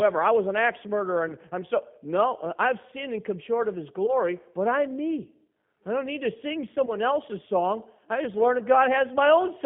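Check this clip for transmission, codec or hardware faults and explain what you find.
Two faults can be heard: codec damage across the whole recording and three brief dropouts covered by concealment.

Throughout, the speech sounds narrow, slightly rough and synthetic, confined to roughly 150 Hz to 3.5 kHz. This is the G.729 codec at 8 kbit/s, which rebuilds each 10 ms frame from a vocal tract filter, a pitch estimate and a few pulses. Its damage is plainly audible.

At 1.29 to 1.33 s, after "was an axe murderer" and before "I'm so", at 4.06 to 4.14 s, after "come short of his" and before "but I'm me I", and at 6.86 to 6.93 s, after "don't need to sing" and before "else's song I just", the sound briefly turns into a buzzy tone or coloured noise and weakens. This is VoIP packet loss concealed by the speech codec. Each gap fits a single lost 10 ms frame. The decoder extends the last pitch and filter at falling gain, and the lingering distortion follows from each frame building on the one before.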